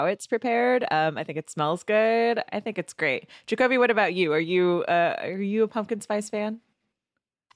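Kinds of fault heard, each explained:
No technical fault can be heard in this speech recording. There is nothing to list under any kind of fault.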